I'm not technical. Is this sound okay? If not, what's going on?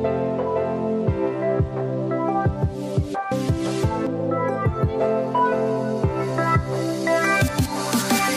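No. At 4.07 s there is damaged data in a compressed stream: a small piece of the stored file was corrupted, so the player briefly couldn't read it and had to find its place again. You hear that as a short chirp or blip.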